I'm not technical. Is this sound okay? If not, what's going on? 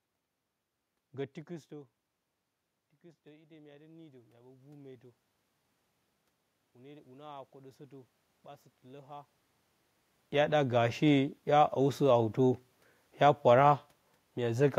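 No, not quite. Around 3.23 to 5.08 s, and again from 10.3 to 12.29 s, there's automatic gain rising. The level control decides things have gone too quiet and slowly turns itself up, so the speech and the room noise behind it swell together over a couple of seconds. In the first case the incoming sound had dropped away quite sharply, and the control is catching up.

Right after that, from 12.39 to 14.74 s, you get automatic gain falling. The control judged the sound too loud and eased itself back down, so everything sinks again, background included. The level shifts near 1 s and 9 s are just the talker moving relative to the microphone.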